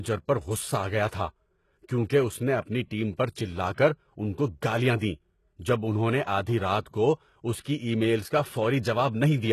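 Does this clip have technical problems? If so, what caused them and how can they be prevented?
Yes. Throughout the speech, nothing is left above 12.3 kHz, and the treble below that sounds synthesised. S sounds are gritty and lispy. This is likely heavy HE-AAC compression, which fits a bitrate near 16 kbps. Spectral band replication copies lower bands upward, so the top stays bright but its harmonics don't line up. A plain low-pass filter would sound dull instead. Preventing it means encoding at a much higher bitrate, where the codec can code the treble directly rather than rebuilding it.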